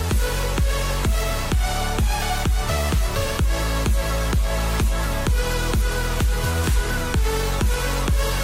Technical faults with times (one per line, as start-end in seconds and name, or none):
none